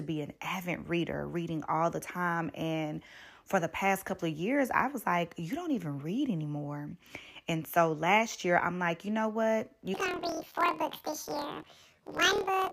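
Speech clip, and from 9.94 s, right after "like you know what", to the end it turns into a robotic buzz at about 38 Hz. That's planar audio read as interleaved: each 26 ms block of left-then-right samples plays twice at double speed.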